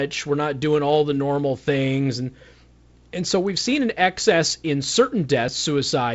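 Nothing goes wrong in this speech. It's simply carried over G.722 wideband telephone coding at what sounds like 48 kbit/s, so the sound stops at about 7.7 kHz and carries the faint hiss that codec leaves.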